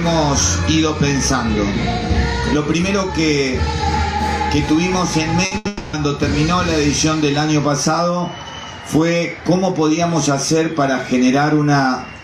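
Two bursts of packet loss hit the audio at 5.45 to 5.53 s and 5.57 to 5.67 s, with a brief stretch of real audio between them. In each, the receiver extends the last received sound, about 60 ms and then about 80 ms of it, as a held buzz or hiss that sags in level. An equal amount of the original is skipped. On a spectrogram these show as short patches of frozen, horizontally smeared bands where the normal detail stops. On the waveform they are a repetitive, shrinking stretch followed by a hard jump where fresh audio resumes.

Straight after, from 5.67 to 5.95 s, the sound freezes again for about 260 ms, likely a long network dropout. The concealment carries on the whole time and never falls to silence, fading gradually while roughly a quarter second of the original is lost. A spectrogram shows a longer run of smeared, dimming bands ending in an abrupt restart. The waveform shows a tapering, self-similar section before normal variation returns.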